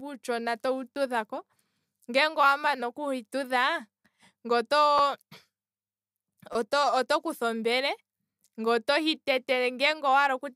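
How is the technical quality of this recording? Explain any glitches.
The speech is marred by three short repeated-buffer glitches. At 0.95 s and 4.98 s, and again from 6.53 to 6.55 s, fresh audio failed to reach the playback device in time, so it replayed the block it already held. Each repeat lasts about 10 ms, which fits a 10 ms buffer. At 6.53 s the block plays twice more. The tiny repeats come out as hard-edged clicks or a brief buzz rather than an audible stutter, and roughly 10 ms of the speech is lost each time, or about 20 ms at 6.53 s.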